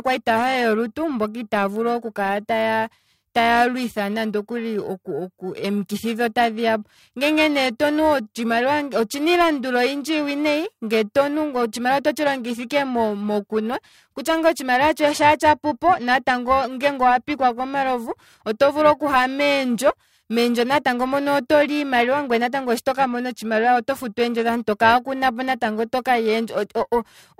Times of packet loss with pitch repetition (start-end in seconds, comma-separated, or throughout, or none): none